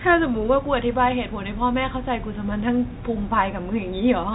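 Nothing stood out on listening to this speech recording, which comes across with the narrow band of an ordinary telephone line.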